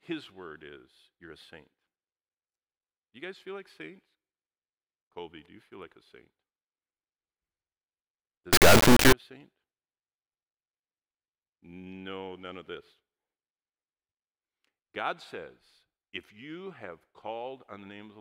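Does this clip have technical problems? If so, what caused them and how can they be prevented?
Yes. From 8.53 to 9.13 s the speech becomes an extremely loud, buzzing square wave that jumps between near-silence and the clipping limit. This is an integer read as float fault, consistent with 32-bit integer samples being interpreted as 32-bit float, so the values come out either almost zero or far beyond full scale. Unlike ordinary overload clipping, where the flattened tops still follow the speech, little of the original waveform survives. Declaring the sample format explicitly and checking it wherever audio buffers are passed between components prevents it.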